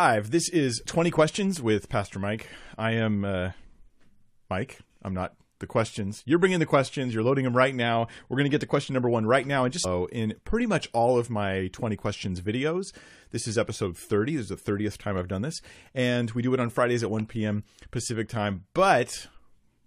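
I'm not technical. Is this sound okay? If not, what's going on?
No, at about 9.84 s the speech suddenly jumps ahead with a tiny blip, likely a stream segment skipped, so a bit of the recording never loaded.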